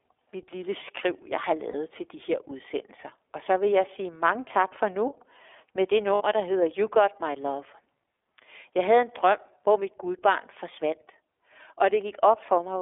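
The whole recording sounds thin and boxed-in, with a slightly rough, synthetic edge to the speech. It is the iLBC codec at work. The audio is held to a telephone band of roughly 300 Hz to 3.5 kHz, and each 30 ms frame has its excitation coded on its own. The plainly audible coarseness fits iLBC's 13.33 kbps mode, which spends few bits on the fine detail of the waveform.

At 1.71 to 1.75 s, and again at 6.15 to 6.22 s, the sound briefly freezes into a held, faintly buzzy, breathy tone before normal speech snaps back. These are lost iLBC frames. The first gap lasts 30 ms, which points to a single lost frame. The second runs 60 ms, consistent with two frames. The decoder filled each hole by repeating the last pitch cycle mixed with noise. Because every frame decodes independently, recovery is almost immediate.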